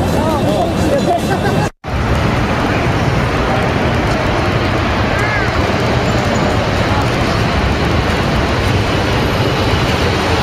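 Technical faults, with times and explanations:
0.10 to 10.35 s: periodic USB or driver dropouts. A recurring bus or driver stall cuts about a millisecond to silence every 64 ms. This gives steady ticks wherever there is sound.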